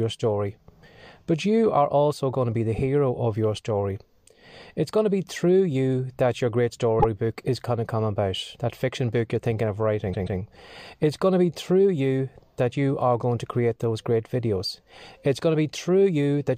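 A stutter at 6.99 s, between "you that your great" and "is going to come", replays a 52 ms snippet once. After "book you're thinking of", at 10.12 s, a 131 ms snippet sounds three times, adding 0.26 s. These are repeated frames: compressed blocks arrived more than once and the decoder played each copy.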